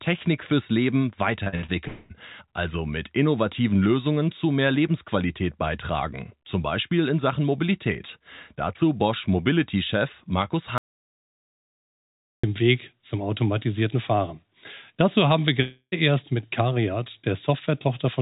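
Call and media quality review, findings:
Repeated packet loss (robotic sound), 1.44–1.70 s: choppy stretch with four short holes, longest about 57 ms. Roughly half the span is the receiver repeating the last bit of sound. Jitter buffer concealment; the path tops out at 4 kHz, which fits G.711 at 64 kbps.

Long network dropout, 1.88–2.12 s: about 0.22 s of speech missing, covered by a fading buzz carried over from the last sound, never reaching full silence. Likely a network gap too long for the jitter buffer to hide.

Long network dropout, 15.62–15.94 s: about 0.3 s lost. The concealment buzz fades into about 70 ms of silence before speech picks up again. Likely burst loss upstream, with the same concealment behaviour as at 1.9 s.

Audio dropout to silence, 10.78–12.44 s: hard cut to silence for about 1.66 s with no room tone, then speech resumes mid-flow. Likely the input device or link dropped while the encoder kept writing silence. 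Everything in that gap is gone.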